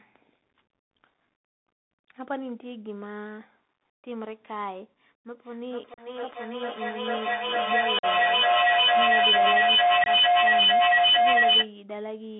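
From start to finish the speech carries the Bluetooth CVSD headset codec. Everything sits between 200 Hz and 3.6 kHz, which fits a 64 kbps CVSD link, and plainly audible granular hiss and scratchy sibilants set it apart from an ordinary band-limited phone line, whose narrow band stays smooth.

At 5.31 s a feedback howl begins, a microphone-to-loudspeaker loop gaining level on each trip. It narrows to a tone around 700 Hz, repeats roughly every 400 ms and peaks about 13 dB above the speech until 11.73 s. Unlike a fading echo, the repeats grow.

Within that howl come three spots of unconcealed Bluetooth headset packet loss, at 5.94 s (37.5 ms), 7.99 s (45 ms) and 10.04 s (22.5 ms), each fitting roughly ten or fewer lost packets. These are abrupt holes followed by briefly quieter audio, not the smoothed-over gaps that concealment would leave.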